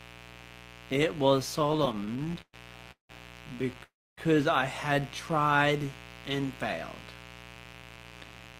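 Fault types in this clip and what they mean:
Mains buzz: Throughout the speech there is a steady, raspy 60 Hz buzz sitting about 20 dB below the signal. Sharp switching spikes from a dimmer, rectifier or unshielded line enter the signal twice per mains cycle. Each spike carries a long train of 60 Hz harmonics reaching into the kilohertz range, so the buzz has an edge rather than a smooth hum and stays present under every part of the clip.
Repeated stalls (stutter): From 1.59 to 2.55 s the audio catches and drags. Packets kept arriving late, so the jitter buffer emptied 17 times in under a second. Each time the receiver stretched out the last sound until data resumed, filling 286 ms in all, about 30% of that stretch, with the longest hold lasting 118 ms. Nothing is lost. The speech is simply pulled apart by repeated short halts.
Call audio freeze: At 2.91 to 3.11 s and again at 3.83 to 4.19 s the speech stops and then picks up where it left off. 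This is likely from packets held up in transit, which left the jitter buffer empty. The receiver carried the last sound forward and let it fade. The first freeze adds 179 ms, of which 120 ms is silent, and the second adds 343 ms, of which 270 ms is silent.
Jitter buffer speed-up: From 7.55 s to the end the speech runs at about 113% of normal speed while keeping its pitch, so it sounds hurried. The buffer was holding more audio than its target. To bring the delay back down, the receiver cut many short pieces one or a few pitch periods long, removing about 150 ms in total over the final second.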